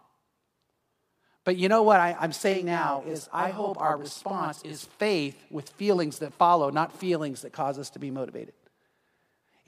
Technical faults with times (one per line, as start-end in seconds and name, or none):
2.52-4.85 channel delay (doubling)